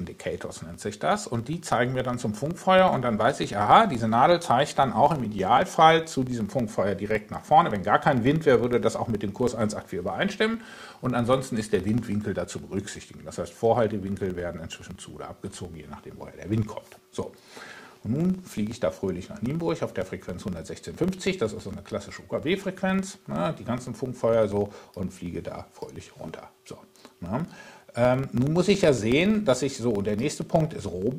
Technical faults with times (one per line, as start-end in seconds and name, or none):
0.00-31.18 filter restarted on every block